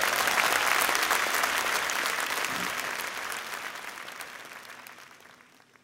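Listening closely, nothing in the sound stood out as a technical problem.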